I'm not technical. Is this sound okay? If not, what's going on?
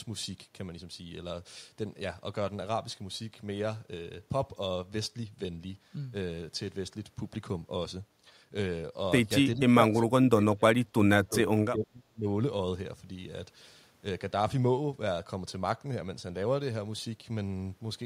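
No. From 9.55 to 12.26 seconds there is speech suppressed in double talk. Both ends were likely talking at once, and the echo canceller, unable to tell this voice from echo, turned it down. The speech sinks to near silence in patches totalling about two seconds.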